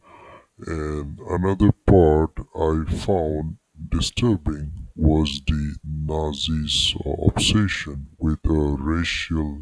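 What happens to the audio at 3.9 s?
At 3.9 s, as across the whole clip, the speech shows a wrong sample rate fault. The samples are clocked out slower than they were captured, with no conversion, so everything runs at about 0.69 times normal speed and sits roughly 6.5 semitones low, which fits a 32 kHz recording played back at 22 kHz.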